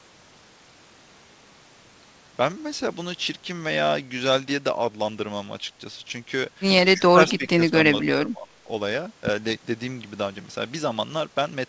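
Speech suppressed in double talk, 6.97 to 7.22 s: the speech dips by about 20 dB for roughly a fifth of a second, likely because an echo canceller, facing both sides talking at once, turned down the near talker along with the loudspeaker echo.

Echo leak, 7.28 to 7.48 s: a faint copy of the speech returns 230 ms late, about 25 dB below it, likely residual loudspeaker pickup that the far end's canceller failed to remove. Within it, speech suppressed in double talk again pulls the level down about 10 dB from 7.38 to 7.44 s, likely the same canceller clamping during overlap.

Speech suppressed in double talk, 8.16 to 8.59 s: a longer hole of about 400 ms, up to about 20 dB deep, where the speech sinks and thins, likely the suppressor reacting to simultaneous talk.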